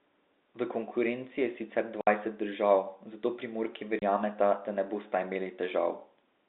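Packet loss filled with silence at 2.01–2.07 s and 3.99–4.02 s: lost packets, likely 30 ms each, leave 60 ms and 30 ms silent holes in the speech, with hard edges.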